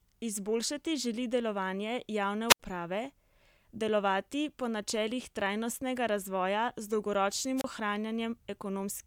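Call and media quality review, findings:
Wireless microphone squelch dropout at 2.48–2.60 s and 7.56–7.64 s. Hiss rise, then receiver squelch mutes the faded FM link: about 73 ms and 31 ms of silence.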